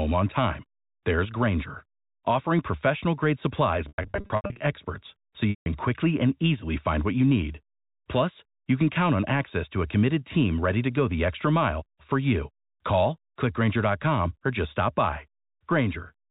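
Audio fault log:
3.88–4.60 s, packet loss with pitch repetition: after "offering professional grade supplies", 460 ms drops out in scattered gaps across 720 ms, the longest 100 ms. The last pitch period is repeated to bridge each gap, giving held, buzzy fragments before "experts so".
5.50–5.66 s, packet loss with pitch repetition: 160 ms lost after "experts so" is bridged the same way, with a buzzy held tone fading out and a cross-fade back into "quickly and easily find".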